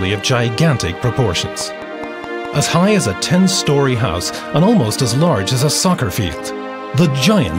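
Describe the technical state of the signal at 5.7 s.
Nothing at 5.7 s points to a fault; the signal is intact at that moment.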